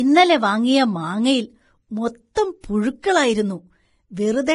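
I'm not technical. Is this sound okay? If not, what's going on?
No. From start to finish the speech sounds hissy and grainy, as if a fine layer of sandy noise sits on top of it, and sharp sounds like the starts of consonants come across blurred rather than crisp. There's also nothing above about 10.6 kHz, so the top end feels dull. This is likely heavy Vorbis compression: to save space, the encoder cut off the highest frequencies and stored the remaining treble so roughly that the fine detail turned into noise.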